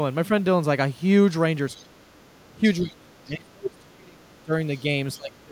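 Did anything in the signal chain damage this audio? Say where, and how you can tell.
Yes, in call processing. Other side's voice leaking through: faint second voice at 1.76 to 1.81 s and 4.76 to 4.8 s, roughly 30 to 35 dB down, seen as stray spectrogram harmonics, likely residual echo.

Speech suppressed in double talk: speech drops by some 25 to 30 dB at 1.78 to 2.02 s, 2.56 to 4.52 s, and 5.16 s onward. The waveform envelope caves in and spectrogram energy fades, likely as the echo canceller ducks it.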